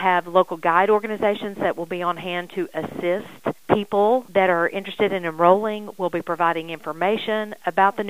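From start to finish the signal is stored at low bit depth with dither: it was rounded to very few levels after dither noise was added, and a noise floor around 35 dB below the signal points to about 9 bits. The rounding error becomes a constant, even hiss with no distortion.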